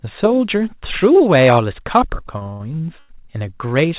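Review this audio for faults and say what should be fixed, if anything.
Between 2.38 and 3.11 s there's a stutter, repeated stalls: six times the jitter buffer ran dry and the receiver stretched the last sound, filling about a third of that stretch, the longest gap 96 ms. Nothing's lost, but it drags. A deeper adaptive jitter buffer, or steadier packet delivery on the network, would stop it. The band stopping at 4 kHz is just the G.711 narrowband codec.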